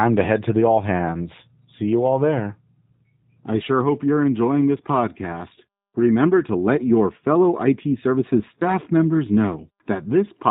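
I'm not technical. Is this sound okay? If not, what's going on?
No. The whole clip has passed through the G.729 codec, a phone-call voice compressor that rebuilds speech from a rough model instead of keeping the real sound. That leaves it muffled, with nothing above 4 kHz, and slightly rough and synthetic from start to finish.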